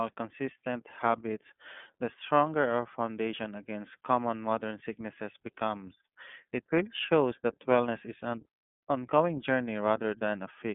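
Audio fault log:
Throughout: iLBC codec, rough and synthetic speech from independently coded 30 ms frames; the spectrogram shows a band from 150 Hz to 3.4 kHz and nothing above 3.6 kHz.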